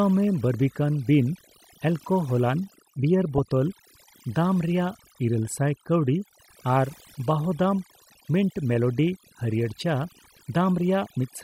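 Overdone noise removal runs throughout: bands near the noise estimate are pulled down hard, leaving a lowered background that breaks up into twinkling specks. At 3.38 s a brief DAB burble appears, with short blips of noise in single sub-bands from bit errors that slipped past correction. It is short, with a bit error rate near 0.15 percent.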